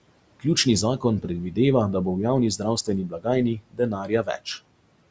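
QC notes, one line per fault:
3.08–3.26 s and 3.55–4.4 s, speech cut by the noise suppressor: the suppressor mistook quieter stretches of speech for background and pulled them down with it, by about 18 dB and then about 19 dB, so roughly a few hundred milliseconds of speech come out swallowed and faint.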